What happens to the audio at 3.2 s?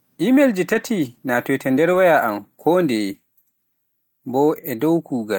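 Nothing goes wrong at 3.2 s; the speech runs through that moment intact, with no dropout, click or other fault to be heard.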